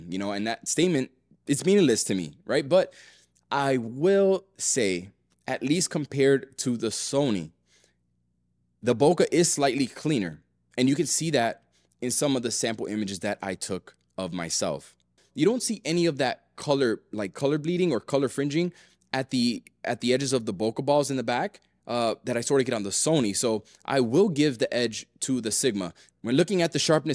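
Nothing technical stands out here; the audio runs along without any glitches, dropouts or other problems to point at.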